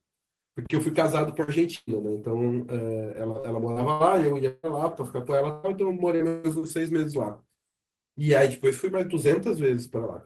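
At 1.43 s and again at 6.15 s there is short concealed packet loss: about 40 ms of the call failed to reach the decoder in time. The gap was filled by extending the preceding speech and then blending back, so each instance is heard as a brief smear or wobble in the speech.

A burst of packet loss runs from 1.75 to 1.90 s and again from 5.51 to 5.66 s. In each, roughly 120 ms of audio was lost in a row. The receiver stretched the last sound and faded it, producing a held buzz or fading hiss. The first burst ends in about 10 ms of silence before the speech resumes further on.

Between 3.39 and 4.66 s there is repeated packet loss, heard as robotic sound. Four separate gaps totalling 320 ms were patched one after another, the longest about 156 ms, so roughly a quarter of that stretch is synthetic fill. The result is choppy speech with pieces missing.

From 6.28 to 6.47 s the speech gives way to about 160 ms of sustained, fading fill and then picks up later, with that portion gone. 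This is likely a long network dropout, where no audio arrived for that span and the receiver concealed it by extending the last sound.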